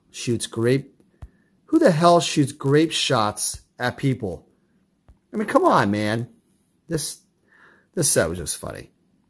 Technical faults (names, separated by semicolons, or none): resampler restarted on every block